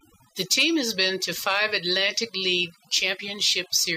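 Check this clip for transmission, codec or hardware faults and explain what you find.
The fault here is overdone noise removal, present for the whole clip. A noise reduction stage was set far too aggressively, so each frequency band that dropped close to its noise estimate was pulled down hard or switched off, taking the quieter parts of the speech with the noise. Between phrases the background collapses to near silence dotted with twinkling specks.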